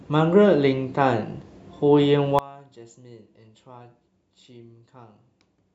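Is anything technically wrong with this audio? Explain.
Yes. One channel inverted, from 2.39 s to the end of the clip: the speech suddenly drops by about 22 dB and turns faint. This is likely caused by one stereo channel having reversed polarity. When the two channels are summed to mono, the centred content they share cancels. Only the small difference between them survives, so the speech keeps going as a weak trace.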